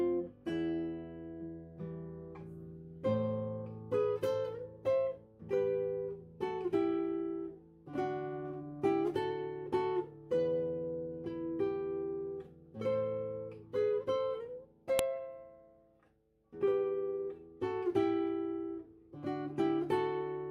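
File header played as audio at 14.99 s: a sharp, loud click where a second piece of audio begins. Its file header was not stripped when the pieces were joined, so those few dozen header bytes play back as samples and snap out regardless of the surrounding sound.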